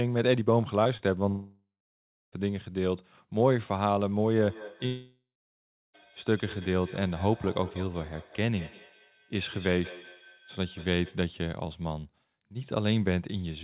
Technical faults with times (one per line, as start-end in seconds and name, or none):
0.84-1.01 short concealed packet loss
1.29-2.34 long network dropout
4.37-11.27 feedback echo between two devices
4.86-5.95 long network dropout